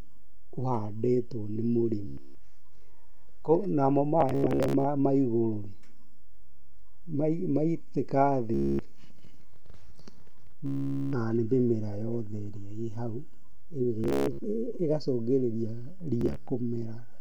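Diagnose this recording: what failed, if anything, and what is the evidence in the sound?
Bluetooth stutter in this speech at 2.07–2.28 s (after "ũhandĩtwo nĩ"), 4.21–4.85, 6.45–6.74, 8.54–8.79, 10.66–11.13 (before "nĩ mĩmera"), 14.04–14.39 and 16.21–16.36 s. The wireless link dropped packets, and the receiver looped its last short slice, buzzing for up to 0.46 s. Speech then resumed further on.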